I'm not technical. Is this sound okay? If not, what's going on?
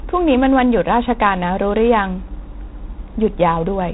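No, not quite. The whole clip, start to finish, has been squeezed through G.726 ADPCM, a phone-line coding scheme that stores each moment of sound as a rough guess at how it changed from the last one. Here it's set to a fairly stingy level, so the speech picks up a harsh, raspy hiss that gets louder when the talking does. Everything brighter than about 3.9 kHz is gone, too, giving that muffled telephone feel.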